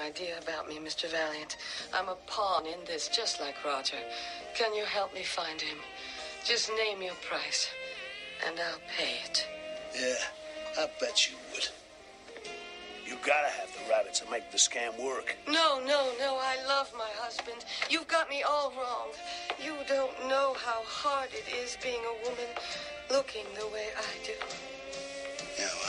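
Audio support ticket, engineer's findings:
No faults found on listening.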